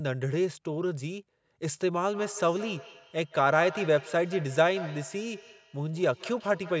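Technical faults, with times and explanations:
2.14–6.8 s, feedback echo between two devices: from 2.14 s to the end, the speech is shadowed by a thin, ringing repeat trailing each sound by roughly 150 ms and peaking about 15 dB below the direct speech. Two devices on the same call share the room: one plays what the other's microphone sent, that microphone hears it again, and neither echo canceller removes sound played by the other device, so the delayed copy keeps returning.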